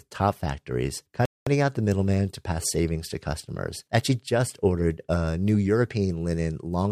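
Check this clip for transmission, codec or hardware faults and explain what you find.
There's one fault here, a playback stall. At 1.25 s, right after "top factories", the speech cuts to silence and stays dead until 1.47 s, a gap of about 0.21 s, then picks up with "out the middleman to". The likely cause is the player running dry on data or its output thread getting blocked, so nothing reached the output until it recovered. You hear it as an abrupt hole mid-sentence rather than a natural pause.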